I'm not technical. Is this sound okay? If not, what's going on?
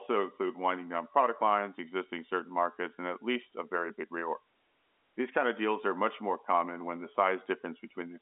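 Yes, nothing stood out when listening to this speech, which has the narrow sound of an ordinary phone line and only a faint hush of room noise well beneath it.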